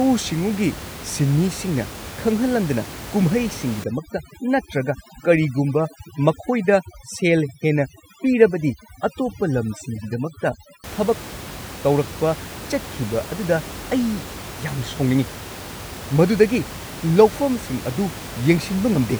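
Speech over room noise sitting about 14 dB below the voice, and from 3.84 to 10.84 s there's overdone noise removal: bands near the noise floor get gated right down, leaving twinkly near-silence and taking quiet parts of the voice with them.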